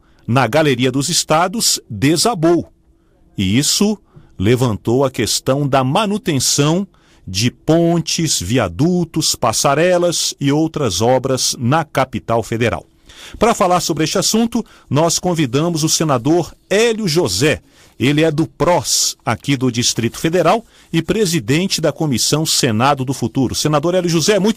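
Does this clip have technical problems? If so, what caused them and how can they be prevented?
No, no technical problems detected.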